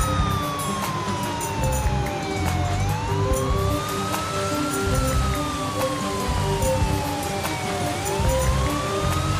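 Nothing is technically wrong with this audio clip.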